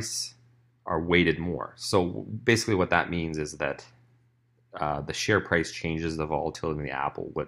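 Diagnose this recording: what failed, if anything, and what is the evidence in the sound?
Nothing failed; no faults detected.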